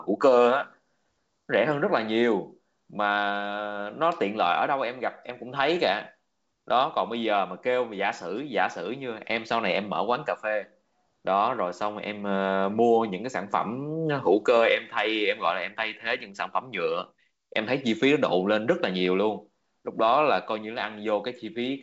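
Nothing's wrong with this speech clip: it comes through on G.722 wideband telephone coding at 64 kbit/s, with nothing above about 7.7 kHz, just as that path should sound.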